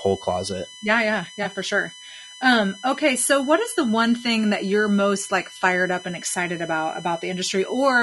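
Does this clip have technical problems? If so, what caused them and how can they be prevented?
Yes. A steady USB whine runs through the whole clip. Its base pitch is 1 kHz, and its 3 kHz harmonic is loudest, about 20 dB below the speech. The bus draws current in 1 ms frames, and that current leaks into the audio through power or ground. Prevent it with a powered hub, a ground-loop isolator or a separate audio interface.

The speech sounds rough and grainy throughout. Noise sits between the harmonics and the top end sounds thin and artificial. The likely cause is low-delay AAC (AAC-ELD) at a low bitrate, around 32 kbps. Its short frames resolve pitch poorly. Prevent it by raising the call bitrate or using a higher-quality codec mode.

AAC frame loss with concealment occurs from 1.43 to 1.46 s, just before "for sure". About 20 ms of audio went missing, which fits one lost frame. The decoder filled the gap from the previous spectrum, leaving a brief smeared, noisy patch. 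Prevent it with a steadier network connection or with packet redundancy.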